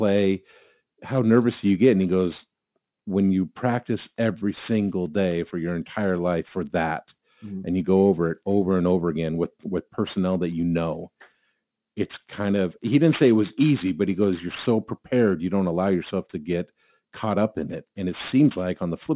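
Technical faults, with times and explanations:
Throughout, aliasing: the speech was brought down to a lower sample rate without the high content being filtered away first, which fits a drop to 8 kHz. Everything that lay above the 4 kHz fold point was mirrored back beneath it as tones unrelated to the original, sitting about 25 dB below the speech. That folded energy gives sibilants a gritty, metallic edge and keeps the spectrum packed right up to 4 kHz.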